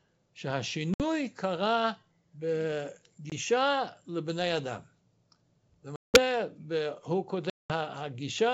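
Packet loss on an ADPCM call breaks the audio four times: 60 ms missing at 0.94–1.05 s, 20 ms at 3.30–3.33 s, 180 ms at 5.96–6.18 s and 200 ms at 7.50–7.72 s. Each gap is filled with silence, so the decoder's predictor and step size drift from the sender's. Speech cuts out abruptly, then resumes with brief, slight distortion. The wideband sound between gaps fits G.722 at 64 kbit/s.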